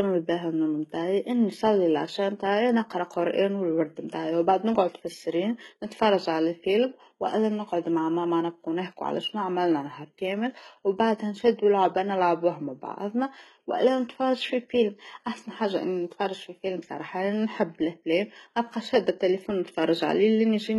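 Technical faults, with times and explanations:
Throughout, HE-AAC compression: the speech has bright but unnatural treble, with gritty, metallic, lispy s sounds and nothing above about 11.8 kHz. The likely cause is heavy HE-AAC coding, pointing to a bitrate near 16 kbps, where the treble is rebuilt from copied lower bands rather than the original.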